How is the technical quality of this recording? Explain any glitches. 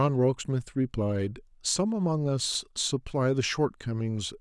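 No audible technical faults in the recording, so there are no glitches to explain.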